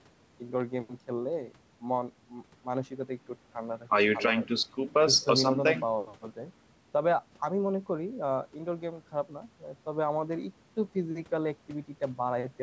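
No technical faults can be heard in the speech, which has passed through a wideband call path that leaves nothing above 8 kHz.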